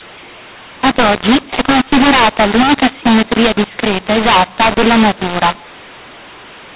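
From start to finish the speech carries a mu-law and A-law mix-up: samples coded with the A-law curve are being expanded with the mu-law curve. The two companding tables disagree, so levels come out scrambled, some peaks too loud, others too soft, and the quietest samples are pushed well above silence. The result is harsh, gritty distortion over the voice and a hiss in the pauses. The band stops near 4 kHz, which fits 8 kHz telephone coding.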